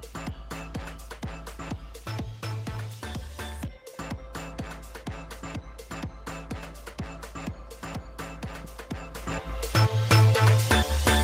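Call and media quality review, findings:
No audible faults detected; nothing to attribute to any component.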